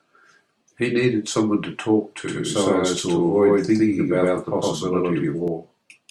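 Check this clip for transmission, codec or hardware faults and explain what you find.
There's one fault here, a doubled audio track. From 2.28 to 5.48 s the speech has a second copy about a tenth of a second behind and roughly as loud, likely from a slower second capture path. It switches on and off abruptly and has no room tail.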